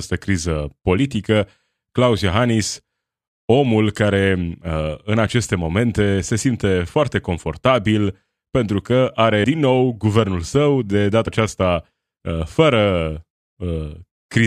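At 9.43 s, right after "pentru că", and again at 11.26 s, after "nou guvernul său de", compressed frames were skipped. About four frames, roughly 100 ms of speech, drop out each time, leaving a quick smeared blip at the join. That gap fits a frame length of about 23 ms.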